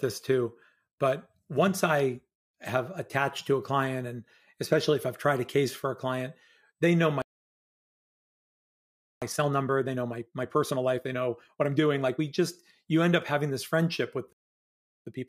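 Speech, interrupted twice by a playback stall. After "a client they know" the sound cuts to silence from 7.22 to 9.22 s. After "having this friendship with" it stops again from 14.33 to 15.07 s. Both gaps are likely caused by the player running short of data. Each stall is followed by time-compressed catch-up. From 9.22 to 12.22 s, and from 15.07 s to the end, the speech runs 1.25 times fast at normal pitch.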